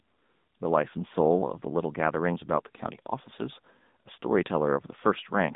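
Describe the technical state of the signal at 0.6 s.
At 0.6 s the speech is passing through the AMR narrowband mobile codec, as it does for the whole clip. The codec resamples to 8 kHz and rebuilds each 20 ms frame from a vocal-tract model fed by a few pulses. The coarse result fits a low mode near 8 kbps. Nothing above 3.8 kHz survives, the line band sits at roughly 150 Hz to 3.7 kHz, and the voice sounds plainly buzzy and synthetic.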